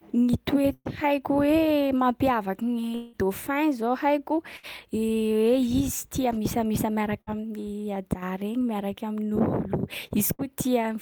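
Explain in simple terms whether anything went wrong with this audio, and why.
At 0.73, 4.57, 7.21 and 10.33 s the speech briefly smears into a short fading buzz or hiss, then jumps ahead. That is burst of packet loss: about 60 ms of sound was lost each time (120 ms at 0.73 s, ending in a brief silence), and the player filled the gap by stretching the last sound. From 2.95 to 3.16 s a longer buzz or hiss fades for about 180 ms before speech returns further on, likely a long network dropout.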